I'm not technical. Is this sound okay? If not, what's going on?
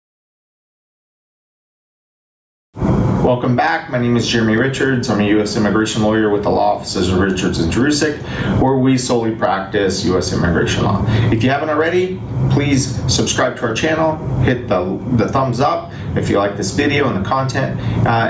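No. The sound has gain pumping all the way through. Loud and soft parts end up closer in level, and the sound is squashed. The swing is large. The likely cause is the level set far too high, with automatic limiting pulling it back down.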